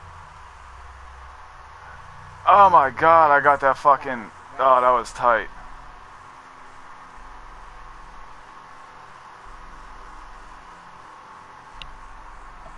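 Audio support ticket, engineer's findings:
Findings: no audible faults found in the audio, nothing to report against any component.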